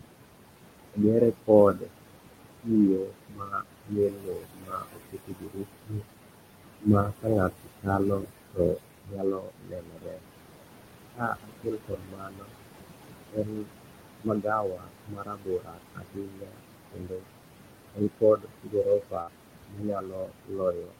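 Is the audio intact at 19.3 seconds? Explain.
No. A burst of packet loss runs from 19.21 to 19.30 s: a short run of packets never arrived in time, so the receiver stretched the last sound for about 59 ms while fading it, then resumed after about 60 ms of audio had gone missing. This is heard as a brief held, dying sound followed by a jump.

This moment also falls inside a span of speech cut by the noise suppressor, from 17.93 s to the end of the clip. The suppressor mistook part of the speech for background and pulled it down by as much as about 22 dB, so softer sounds and endings come out swallowed and faint.

Underneath both, noise suppressor artifacts are present here as everywhere in the clip. The suppressor lowers the room noise, which sits about 11 dB below the speech, by about 21 dB frame by frame. The background sinks between the words and rises under them.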